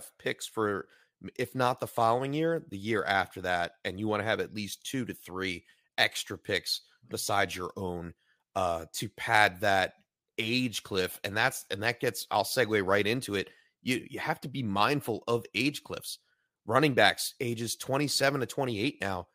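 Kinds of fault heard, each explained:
No technical fault can be heard anywhere in this speech recording. The sound continues steadily throughout, with nothing that stands out as a defect.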